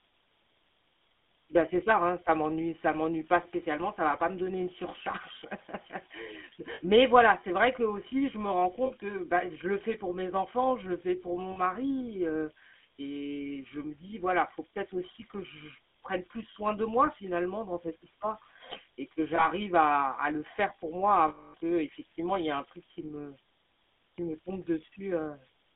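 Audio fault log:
throughout: converter idle tones. A thin whistle sits up around 5 kHz, roughly 24 dB below the speech. It's most obvious in the gaps between phrases and turns into a grainy hiss under the quieter syllables. This points to a delta-sigma converter running without dither. With such a small input it falls into a repeating bit pattern, and that pattern comes out as a steady tone instead of smooth noise.
throughout: GSM full-rate codec. The speech is squeezed into a 250 Hz to 3.5 kHz band, so it has no real bottom end and nothing bright above. It also carries a clearly audible buzzy, gravelly edge, which fits the 13 kbps full-rate coder. That coder rebuilds the voice from a vocal-tract filter driven by a sparse, regularly spaced pulse train. The coarse excitation is what puts the rasp on everything.
6.74–6.81, 8.86–8.91, 11.52–11.60, 19.36–19.47, 21.28–21.55: lost GSM frames. 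Each time, the sound briefly freezes into a rough, metallic ring. The one at 8.86 falls between "aussi je me rends" and "que bah je le". The one at 11.52 comes right after "le fais pour mon", and the one at 19.36 sits between "cette histoire et que" and "à à le faire". The decoder is repeating the last good frame, with the level falling once a loss runs past one frame. The long dropout at 21.28 rings on for about a quarter of a second.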